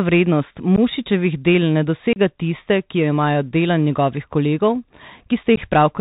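Bluetooth CVSD headset codec, present for the whole speech clip. The sound has passed through a narrowband headset link that codes each sample as a single up-or-down bit with an adaptive step, which fits a 64 kbps CVSD stream. Nothing reaches above 4 kHz, so the speech is dull and boxy. Fast, loud high-frequency energy outruns the step size and distorts, sibilants turn scratchy, and a granular hiss sits plainly under the whole recording.

Unconcealed Bluetooth headset packet loss at 0.76 to 0.79 s, right after "del ne" at 2.13 to 2.18 s, and at 5.56 s. Voice packets between headset and phone went missing and nothing was patched in, so the signal drops out abruptly. About 15 ms is lost in the first and last holes, roughly a couple of packets each, and 30 ms in the middle one, a handful of packets. Each gap has hard edges, and the speech resumes briefly quieter as the CVSD step size recovers.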